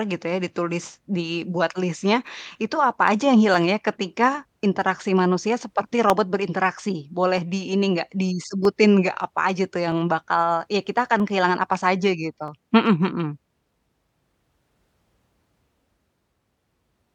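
From 1.0 s to 16.3 s, a click recurs every 1.27 s in the speech, about fifteen in all. These are likely clock drift buffer slips: two clocks differing by roughly 300 ppm force the buffer to drop or repeat around fifteen samples each time.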